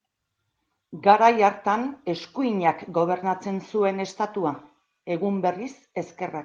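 No technical faults are audible.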